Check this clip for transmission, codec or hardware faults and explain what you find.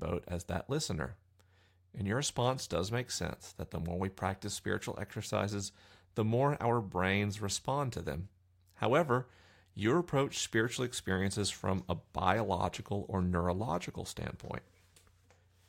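Listening to the speech in the clip, nothing stood out as a problem.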